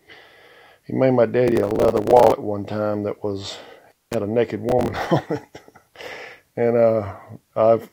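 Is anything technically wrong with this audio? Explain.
Yes, there are two kinds of fault, and one of them occurs twice.

From 1.48 to 2.32 s, and again from 4.69 to 5.07 s, there is processor overload crackle. The system could not finish its small audio buffers on time, and it missed deadline after deadline. Each miss replayed a scrap of old audio with hard edges, and the grain of the crackle fits buffers of roughly 10 ms. The result is a gritty tearing laid over the sound, which keeps going underneath. That continuity sets it apart from a contact fault.

From 3.91 to 4.15 s there is an intermittent contact. A loose connection opened for about 0.18 s, and the sound cut out completely. A sharp crackle marks the point where it broke and the point where it came back, with only faint hiss in between. Unlike the overload bursts, nothing of the sound survives through the gap, and no repeated fragments appear.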